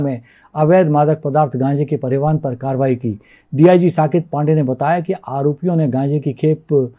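No technical faults are audible.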